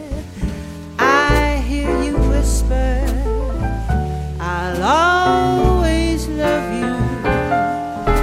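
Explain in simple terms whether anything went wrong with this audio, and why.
Nothing went wrong; no problems can be heard anywhere.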